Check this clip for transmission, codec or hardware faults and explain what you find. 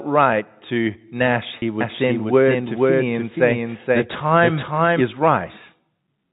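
Two faults stand out in this speech clip, which comes through a G.711 telephone channel limited to 4 kHz.

Packet loss with pitch repetition, 1.59 to 1.62 s: about 30 ms of audio went missing, which points to a single dropped packet. The receiver covered the hole by repeating the last pitch period it had. Because the gap is so short, the concealment never fades to silence. What you hear is a brief held, slightly buzzy tone where the voice should have kept moving, then normal speech resumes.

Doubled audio track, 1.81 to 5.01 s: a second copy of the speech is mixed in about half a second behind the first and at roughly the same level. This is likely caused by the signal being captured again through a slower path. The copy carries the full band with no decay or room colour. It cuts in and out abruptly, so for those three seconds every phrase is followed by an equally loud, dry repeat.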